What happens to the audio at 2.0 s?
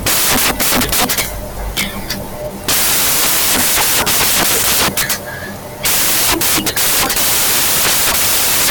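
At 2.0 s the speech is buried under samples built from the wrong bytes, a fault that runs through the whole clip rather than starting there. The bytes making up each sample are being joined wrongly, whether shifted by one byte, swapped in order or misaligned, so the rapidly fluctuating low-order bits land in the most significant position. The result is loud, harsh broadband noise.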